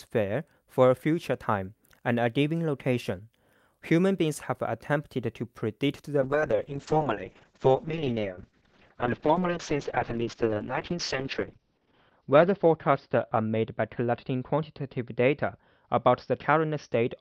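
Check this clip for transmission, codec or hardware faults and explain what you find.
One fault is present: a call bitrate drop from 6.22 s to the end. The encoder lost most of its bit budget, so the audio becomes coarse and watery. High frequencies above 6 kHz disappear, consistent with a fall from about 64 kbps to 6 kbps, lasting about 5.6 s at the lowest rate.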